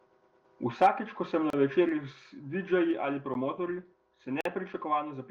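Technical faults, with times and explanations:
1.50 to 1.53 s, 3.34 s and 4.41 to 4.45 s, block of digital silence: The speech drops to silence three times, first right after "ko sem na". The gaps last 30 ms, 12 ms and 46 ms. They start and stop abruptly. The shortest sounds like a tick, the longest like a small hole. The 12 ms and 46 ms lengths fit 512-sample and 2048-sample buffers that were not filled in time.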